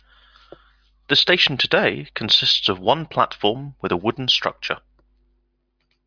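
Nothing in this speech recording stands out as a technical fault at any point, so there's nothing here to flag.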